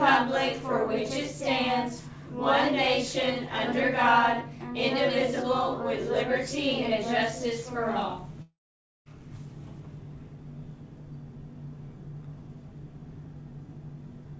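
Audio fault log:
8.42 to 9.08 s, long network dropout: the sound breaks off for about 0.64 s. The last fragment is stretched into a fading buzz or hiss that gives way to roughly half a second of silence, and the audio then resumes further on with that stretch missing. The likely cause is that no packets reached the receiver, whose concealment could only smear the final sound before muting, over a call path with nothing above 8 kHz, which fits G.722 at 64 kbps.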